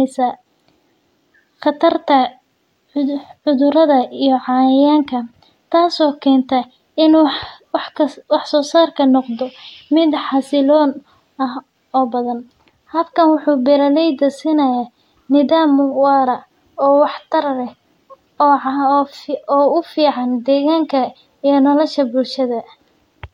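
Speech recording, no technical faults audible anywhere in it.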